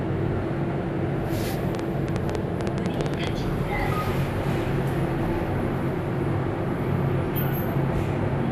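A recording of everyday sounds. The whole clip has MP2 compression damage. It sounds dull, with a gurgling, grainy roughness. The top of the spectrum keeps dropping in and out. This likely comes from MPEG Layer II coding starved of bits, which fits about 80 kbps. Upper sub-bands get switched off, and the rest are coarsely quantised. From 1.75 to 3.28 s there is a train of clicks. About fifteen sharp, similar ticks land unevenly, roughly nine per second. They stand well above the sound. The likely cause is interference or a faulty connection injecting pulses.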